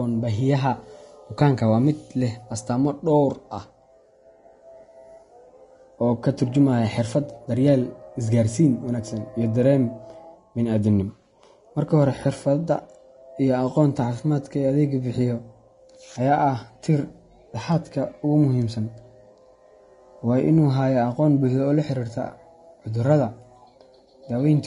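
Speech carrying audible Vorbis compression throughout: grainy, hissy treble and blurred consonants, likely from a bitrate near 32 kbps; a spectrogram shows nothing above 10.6 kHz.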